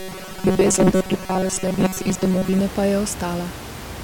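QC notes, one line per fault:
0.01–2.61 s, robotic sound from repeated short buffers: the speech turns into a rigid metallic buzz fixed at 188 Hz, likely because audio arrived too late and about 5.3 ms blocks were looped over most of this stretch; room noise sits about 14 dB under.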